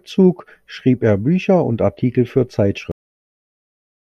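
At 2.91 s the speech stops abruptly in the middle of a sound, with no natural decay, and the remaining 1.2 s to the end is flat digital silence. This is a cut-off end: the final stretch of audio was never written out or played back, so the last buffers are simply missing. The recording is truncated mid-utterance rather than ending where the speaker stopped, and the silence that follows is empty filler, not room tone.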